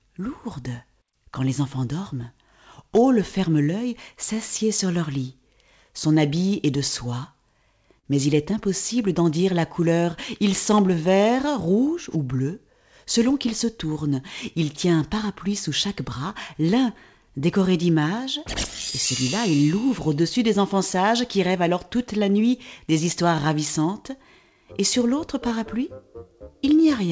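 Clock drift between sender and receiver runs through the whole clip. The sender's clock is slow by roughly 3 percent, so the receiver's jitter buffer keeps draining and must be refilled. The result is a faint, recurring unevenness in timing. The audio is band-limited with nothing above 8 kHz, which fits a G.722 wideband call path.

Repeated timing corrections span 0.21 s to 27.08 s. The receiver keeps stretching short pieces to stay in step, and playback runs at 98 percent speed. Around 0.7 s is added in total, heard as slight hiccups and a subtly dragging, unsteady tempo.

Scattered short gaps occur from 2.94 s to 8.07 s, about four of them, the longest around 50 ms. Each hole is concealed by continuing the preceding sound, leaving brief smears or ticks. A second cluster from 17.03 s to 19.31 s has about three tiny gaps near 10 ms.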